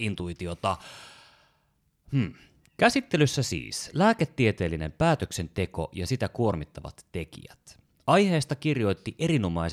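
No dropouts, clicks, distortion or other faults can be heard anywhere in this speech recording.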